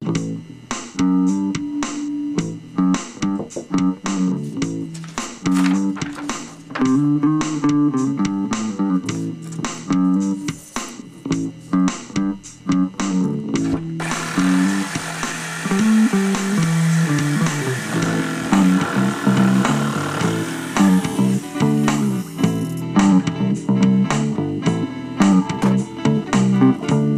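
At 21.22 s a block size mismatch (truncated) begins, and it lasts until the end of the audio. One stage hands on blocks longer than the next stage takes in. The tail of each block is dropped. Those regular cuts produce a buzz at 100 Hz, the block rate. The speed-up factor here is 1.0, so the sizes barely differ. The audio keeps its normal pace and pitch, with the buzz laid over it.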